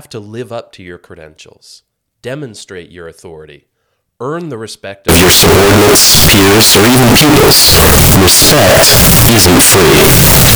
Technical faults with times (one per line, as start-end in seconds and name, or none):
5.09-10.56 signed and unsigned mixed up